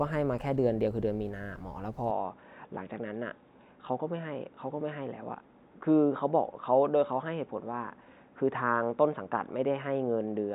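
From 2.11 s to the end, the speech turns dull and boxy with no gap or level jump, losing everything above 3.8 kHz and gaining a very faint new noise floor. The likely cause is an input switched to a poorer device mid-recording.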